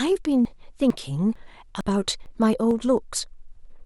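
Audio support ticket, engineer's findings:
Audio missing between chunks: short skips in the speech at 0.45, 0.90, 1.36, 1.81, 2.26, 2.71 and 3.16 s, evenly spaced. Each jump loses roughly 50 ms, and the sides are butted together with no gap. Likely the capture or processing stage running in 0.5 s chunks and dropping a slice at every handover. Worth checking the buffer turnover on that component first.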